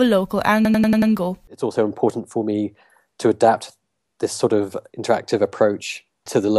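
From 0.65 to 1.12 s there's a system hang loop. The driver stalled while the hardware kept cycling its ring buffer, so one 93 ms slice of the speech repeats five times. It comes across as a machine-gun stutter at 10.8 Hz, which fits a 4096-sample buffer.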